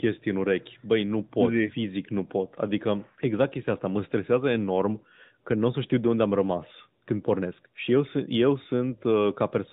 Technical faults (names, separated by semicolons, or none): none